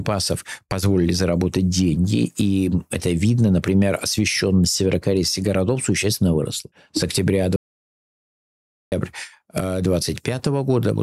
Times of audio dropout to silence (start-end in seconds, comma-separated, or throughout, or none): 7.56-8.92